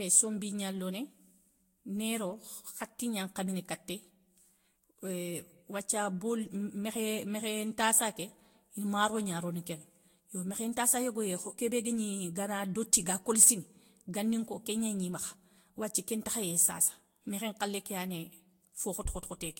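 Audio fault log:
throughout: generation loss. The speech sounds swirly, hollow and smeared, and attacks blur. That is worse than a single encode near 64 kbit/s would explain. It was likely re-encoded with Vorbis about five times, each pass adding fresh noise and spectral holes. Nothing remains above 16.6 kHz.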